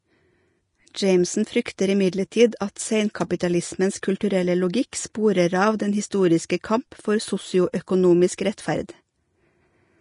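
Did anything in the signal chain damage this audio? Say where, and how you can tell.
Yes, at the codec stage, throughout the whole speech clip. Nothing remains above 10.6 kHz, and the treble beneath that cut-off is hissy and grainy, with roughened tones and smeared consonant attacks. This is likely Vorbis compression at a low setting, which fits a bitrate of roughly 34 kbps. The coarse treble quantisation replaces fine detail with noise of similar energy. A plain low-pass filter would remove the top cleanly without adding this grain below it.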